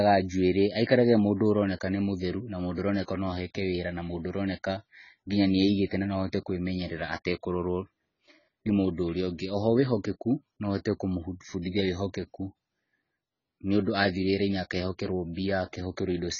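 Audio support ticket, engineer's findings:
AAC compression, whole clip. Speech dull, no content above 7 kHz; sibilants smeared and fizzy, warbling on sustained vowels. Likely cause: AAC-LC encode at heavy damage level, consistent with a bitrate near 16 kbps. Encoder lowered the cut-off and starved bands of bits, leaving spectral holes or noise-filled bands.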